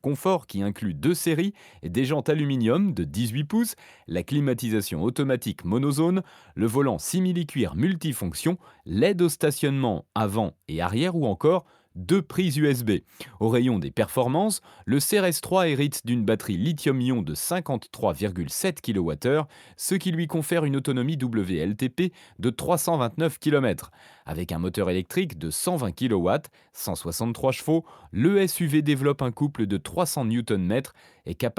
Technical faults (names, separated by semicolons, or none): none